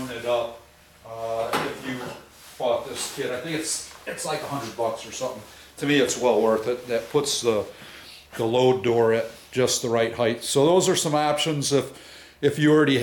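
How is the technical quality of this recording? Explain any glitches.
No audible glitches or faults.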